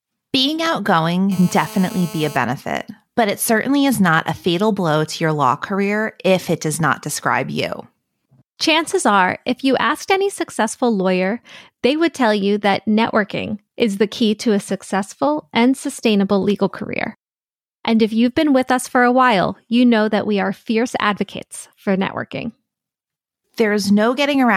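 From 1.32 to 2.37 s, a steady, raspy 217 Hz buzz sits about 18 dB under the speech: GSM phone buzz, a nearby handset's call bursts rectified into the audio.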